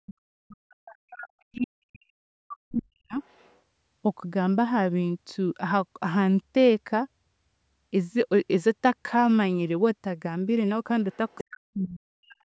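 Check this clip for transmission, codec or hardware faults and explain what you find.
Two echo-cancellation faults appear in this speech clip: speech suppressed during double talk, and the other side's voice leaking through.

Speech suppressed in double talk, 0.0 to 3.21 s and 11.43 to 12.4 s: the talker's level drops sharply, by roughly 40 dB at worst, likely because the echo canceller confused simultaneous talk with echo.

The other side's voice leaking through, at 1.56 s, 3.23 to 3.57 s and 11.12 to 11.44 s: faint scraps of a second voice, about 20 to 35 dB below the speech, likely from incompletely cancelled loudspeaker echo.

The call microphone processing passes nothing above 8 kHz.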